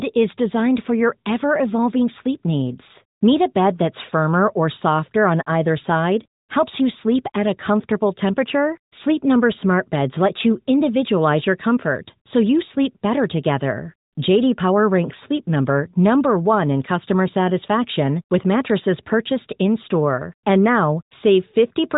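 No technical faults are audible.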